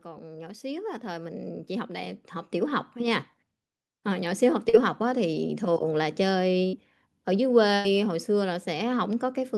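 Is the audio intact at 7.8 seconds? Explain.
No. From about 7.75 to 7.86 s the speech hits a burst of packet loss. Several consecutive packets never arrived in time, so the receiver stretched the last sound it had over roughly 94 ms, fading it as it went, and then jumped ahead. About 100 ms of speech is simply gone. It sounds like a brief held buzz or hiss dying away. A spectrogram shows a smeared, repeating pattern that darkens, then an abrupt restart. The waveform shows a decaying envelope.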